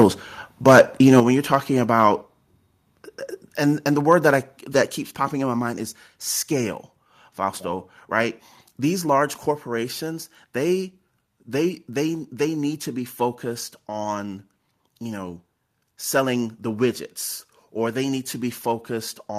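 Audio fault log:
0.00, 0.67 to 0.81 and 1.07 to 1.20 s, microphone overload: The loudest peaks sound harsh and crackly, with flattened tops. They run about 3 to 6 dB past the converter's limit, clipping roughly 5 to 10 percent of samples. The likely cause is microphone input set too high.
1.20, 2.22 and 4.95 s, microphone volume stepped down: The level drops abruptly, about 6, 3 and 4 dB, for voice and background together. The first follows the clipping, just before "when you're talking". The second comes after "when you're talking". The third falls between "word that I that" and "popping in my mind". Likely the call software cutting input gain.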